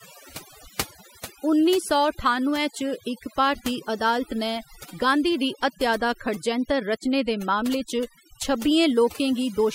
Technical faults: overdone noise removal

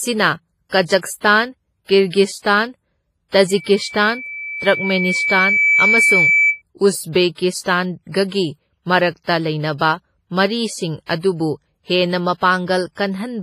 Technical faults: WMA compression; loudspeaker feedback squeal

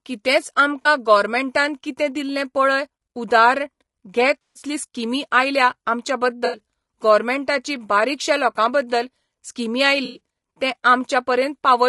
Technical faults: low-delay AAC compression; AAC frame loss with concealment

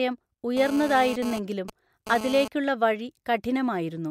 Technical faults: GSM phone buzz

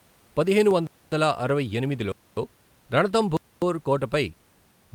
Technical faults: gap between chunks

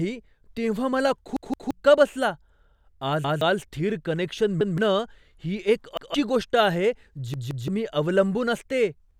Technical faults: repeated buffer

